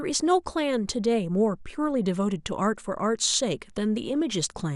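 From start to finish the speech carries the sound of MP2 compression, and a low bitrate, something like 80 kbps, is the likely cause. Starved of bits, the coder drops its upper sub-bands and quantises the remaining ones coarsely, so the audio is dull and has a gurgling, granular roughness. On a spectrogram the top end is cut off and blocks of high frequencies flicker on and off from frame to frame.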